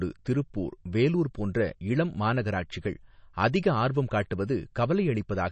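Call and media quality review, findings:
MP3 compression artefacts, whole clip. Speech sounds watery and swirly, sibilants chirp, nothing above about 8.3 kHz. Likely a starved MP3 encode, which fits roughly 32 kbps: treble lowpassed off, weak frequency lines flickering frame to frame.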